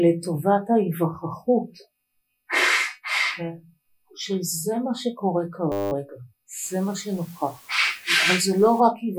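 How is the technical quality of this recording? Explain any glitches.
The recording has two clear technical faults, a brief frozen loop and a later stretch of steady hiss.

A system hang loop occurs from 5.72 to 5.92 s. The playback system stalled while the audio hardware kept replaying the same small ring buffer, so one 10 ms slice of sound repeats exactly 20 times. Because each repeat is so short, the loop fuses into a steady buzz at 100 Hz rather than a stutter, and ordinary sound resumes after the freeze.

Low bit depth with dither runs from 6.64 to 8.80 s. The signal is stored with very few levels, consistent with roughly 8-bit resolution, and dither noise was added before rounding so that the quantisation error is spread evenly instead of following the waveform. The result is a constant, uniform hiss, about 25 dB below the signal, sitting under the sound without gritty distortion.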